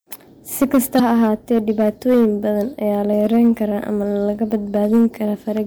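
Throughout the speech, the signal is driven about 7 dB past what a stage in the chain can pass, so a small share of the peaks is cut flat. That hard clipping adds high harmonics, heard as a gritty crackle riding on the louder syllables.

From 0.96 to 1.00 s, damaged data in the compressed stream makes the decoder misread those frames, lose sync and hunt for the next valid frame header. The result is a brief disruption in the sound.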